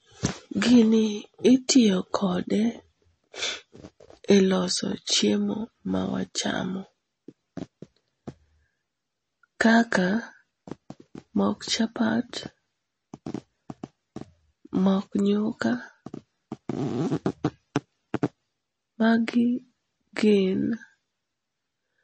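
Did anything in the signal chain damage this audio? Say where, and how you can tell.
Yes. The damage sits at the codec stage and runs through the whole speech recording: the sound is watery and swirly, with s sounds turning metallic and consonant attacks smeared, and nothing survives above 8.3 kHz. That points to likely MP3 compression at a low bitrate, which fits about 32 kbps. Short of bits, the encoder cut the treble at a fixed frequency and dropped weak frequency lines that switch on and off between frames. A spectrogram shows a flat ceiling at 8.3 kHz and patchy, flickering holes below it.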